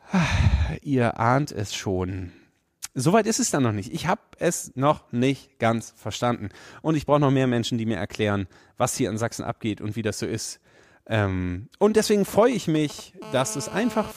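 A speech recording that picks up interference from a nearby 2G phone in two phases. Just after "und deswegen", from 12.28 to 13.24 s, GSM signalling bursts appear: a galloping dit-dit-dit of short 217 Hz buzzes, well below the speech. The phone is sending brief clusters of radio bursts while it handshakes with the network, and the audio circuit rectifies each cluster. The broken rhythm distinguishes these from a steady hum. From 13.25 to 14.12 s this becomes a GSM phone buzz: a continuous, hard, raspy 217 Hz tone rich in harmonics, about 15 dB below the speech and unrelated to it. The phone has entered a call and transmits a burst 217 times a second. Unlike the signalling phase, the buzz is nearly steady.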